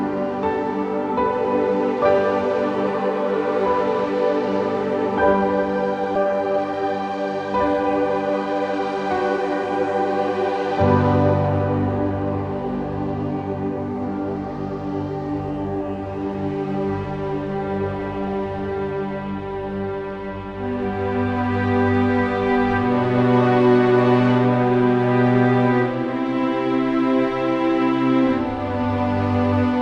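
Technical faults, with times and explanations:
6.15 s, skip ahead: playback jumps straight past roughly a second of audio with no gap filled in, so the two sides butt together almost directly. Later audio was already queued, so that stretch was dropped in transit or thrown out when the jitter buffer overflowed.
6.25 to 8.95 s, jitter buffer speed-up: right after the jump, the receiver is still holding more audio than it wants, so it trims tiny pitch-period-sized slices over and over. The sound runs about 8% fast at unchanged pitch, shedding around a fifth of a second and feeling slightly rushed.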